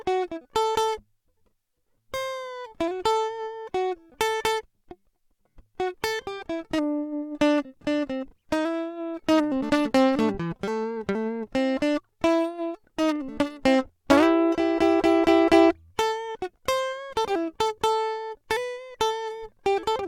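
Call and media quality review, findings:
No findings for this music clip in the call and media quality review.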